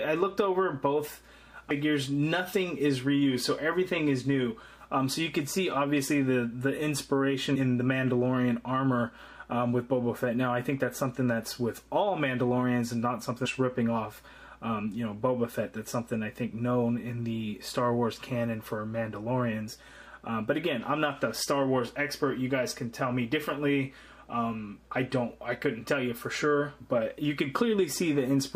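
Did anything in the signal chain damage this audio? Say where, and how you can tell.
Yes. The damage is at the codec stage: damaged data in the compressed stream. Three short blips or squawks interrupt the audio, at 1.70 s, at 7.55 s and from 13.45 to 13.47 s, each lasting about 20 ms. In each case a stretch of the compressed data was lost or corrupted. The decoder misread those frames, lost sync, and emitted a burst of garbage while it hunted for the next valid frame header. It then recovered and decoded normally again.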